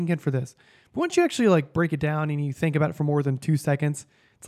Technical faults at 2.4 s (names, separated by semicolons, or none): none